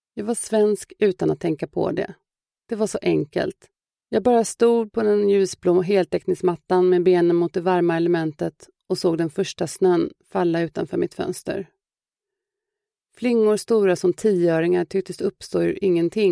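Nothing stood out on listening to this audio.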